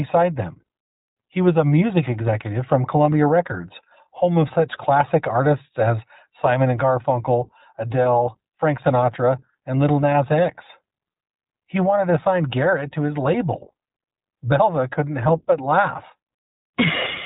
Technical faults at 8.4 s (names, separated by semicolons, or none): iLBC codec